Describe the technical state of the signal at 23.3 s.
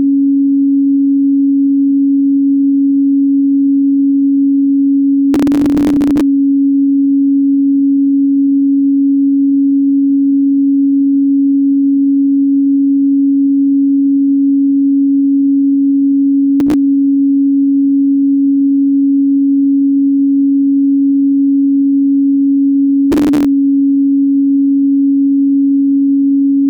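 Processor overload crackle runs from 23.12 to 23.45 s, covering 23.3 s. Over that third of a second the processor repeatedly failed to deliver its tiny audio buffers on time, each well under a millisecond long, and dozens of deadlines slipped in a row. Each missed buffer was simply skipped rather than held, leaving a hard-edged gap. Strung together, these gaps sound like a gritty, tearing crackle laid over the sound, ending abruptly once the load eases.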